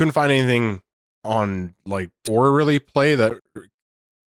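At 2.27 s the speech jumps forward in a skip ahead. Roughly 0.7 s of audio was discarded while later audio was already queued, and the two sides are butted together with no silence and no concealment fill. Unlike a dropout, there is no gap or muffled patch to hear. The speech simply lurches ahead mid-flow, losing a chunk of content, and the delay shrinks by about the same amount.

From 2.37 to 3.70 s a jitter buffer speed-up follows. The receiver was still holding more audio than it wanted, so it repeatedly trimmed short pitch-period-sized pieces, removing about a tenth of a second in total. Speech runs at about 108% speed, slightly hurried, yet the pitch stays where it was. That unchanged pitch is what separates it from a resampling or clock-rate error, which would raise pitch along with tempo.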